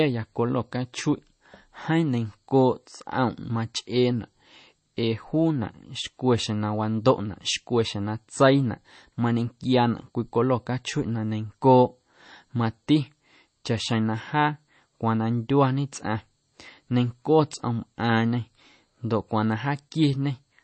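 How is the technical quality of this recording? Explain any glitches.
Quality is poor. Throughout, the speech is dull and watery, with nothing above about 8.3 kHz. This is likely MP3 compression, fitting a low bitrate near 32 kbps. Short of bits, the encoder cuts the treble and drops weak frequency lines. Those lines flicker between frames, so s sounds turn swirly and attacks smear.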